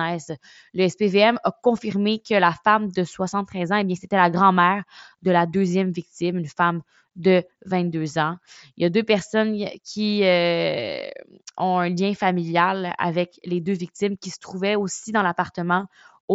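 No technical faults occur anywhere in this speech.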